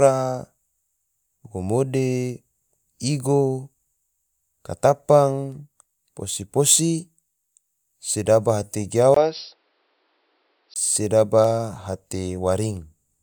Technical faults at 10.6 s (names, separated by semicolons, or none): input switched to a poorer device